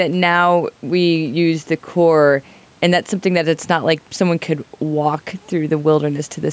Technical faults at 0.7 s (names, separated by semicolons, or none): gain pumping